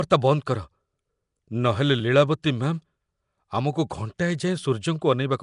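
From start to finish, the speech carries a rough, hissy halo and a smeared, underwater blur, the plainly audible signature of likely Nellymoser compression. Starved bands are refilled with noise, which shows on a spectrogram as grainy speckle, with nothing above 10.6 kHz.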